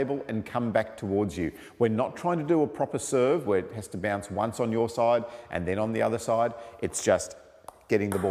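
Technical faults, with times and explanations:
No technical faults can be heard anywhere in this audio.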